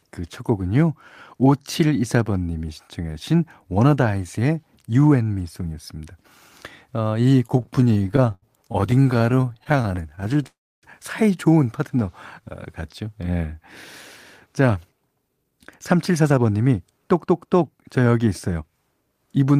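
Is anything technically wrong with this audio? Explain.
Yes, the speech has three kinds of network playback fault, all after the first seven seconds of the clip.

From 7.47 to 10.47 s there are repeated stalls (stutter). Packets kept arriving late, so the jitter buffer ran dry about fifty times, and the receiver stretched the last sound to bridge each wait. The gaps last up to 77 ms and fill roughly a fifth of that span, so the speech drags and stutters, though nothing is lost.

From 10.47 to 10.85 s comes a call audio freeze. The likely cause is packets held up in transit, leaving the buffer empty. The last sound is carried on briefly and then fades into about 290 ms of silence. Playback then resumes where it stopped, about 0.36 s later than before.

From 14.46 to 18.71 s there is a jitter buffer speed-up. Having built up extra audio after the delays, the receiver trimmed many short pitch-period slices to catch up, about half a second in total. 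The speech runs at 111% speed with unchanged pitch and sounds hurried.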